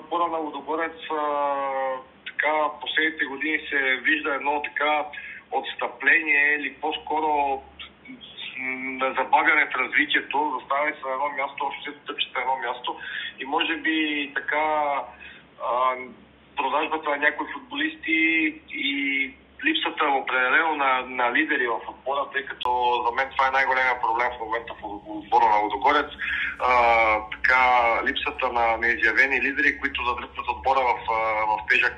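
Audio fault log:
0.00 to 22.65 s, input switched to a poorer device. For the first 22.65 s the sound is dull and boxy, with nothing above 3.8 kHz. A background noise sits well below the signal, roughly 30 dB down. At 22.65 s a gap of about 20 ms breaks the sound, and then the full bandwidth returns and the noise drops away. The level stays about the same. The likely cause is a narrowband input such as a headset call profile, with the system moving to a better microphone at the gap.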